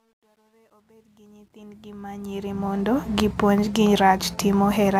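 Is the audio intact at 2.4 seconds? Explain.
No. At 2.4 s the speech is still inside a fade-in that shows truncation distortion on a fade, which runs from 0.0 to 3.0 s and is worst from 0.0 to 1.78 s. The gain stage keeps only about 11 bits and adds no dither. At low gain the waveform falls onto a few coarse square steps, and the quiet part sounds gritty. On a waveform the low-level signal looks staircased, and a spectrogram shows broadband grit in place of clean harmonics. The fade reaches full level at 3.0 s.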